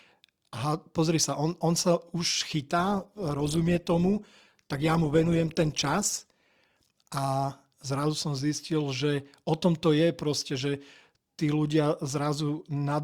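Speech that shows an adaptive stream at a lower bitrate from 2.78 s to 6.78 s. For those four seconds codec artefacts rise, and then full quality snaps back. The sound fits a stream that stepped down from about 64 to 16 kbit/s Opus while the connection slowed. Unlike packet loss, there is no gap, dropout or glitch at either boundary. The switch is clean and sudden.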